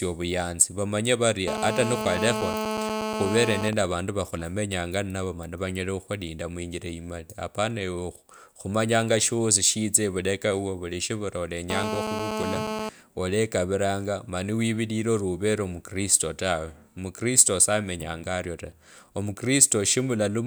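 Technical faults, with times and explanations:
1.48–3.69 s and 11.70–12.89 s, GSM phone buzz: a 2G phone on a call nearby pulses its transmitter about 217 times a second, and the audio circuit rectifies it into a harsh, raspy buzz about 3 dB under the speech. A spectrogram shows a comb of harmonics at 217 Hz spacing; the waveform shows evenly spaced spikes.
3.73–4.57 s, GSM signalling bursts: the phone is still on its call, but its user is silent, so it sends only short groups of radio bursts, which are rectified into even ticks with a longer 217 Hz buzz twice a second, well below the speech level. A spectrogram shows short stacked harmonic patches; the waveform shows clustered spikes.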